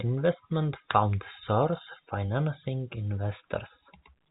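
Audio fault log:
No faults heard; telephone-band speech, nothing above 3.8 kHz.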